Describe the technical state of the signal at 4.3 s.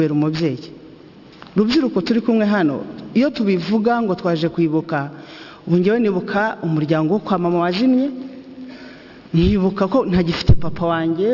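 At 4.3 s the signal shows aliasing, present throughout the clip. Content above 6 kHz folds back to wrong, unrelated frequencies, which points to a drop from 48 kHz to a 12 kHz rate without filtering. The folded tones sit roughly 20 dB down and sound gritty and metallic.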